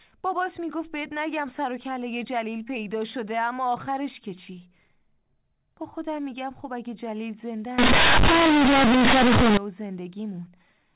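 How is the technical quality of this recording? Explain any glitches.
The recording has one serious glitch, from 7.78 to 9.57 s, set against the narrow telephone band of its mu-law G.711 coding, with nothing above 4 kHz. In that stretch, companded audio is read as linear: the mu-law bytes are played straight as 8-bit samples without expansion. Small sign changes become near half-scale jumps, so the sound turns into loud, buzzy distortion with heavy noise in pauses. The waveform fills out into a dense block, and the spectrogram shows broadband smearing.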